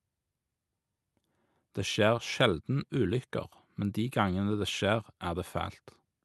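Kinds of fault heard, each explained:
Nothing here counts as a fault: the speech came through an ordinary call path, and its top end stops at around 12 kHz, as you'd expect from that kind of link.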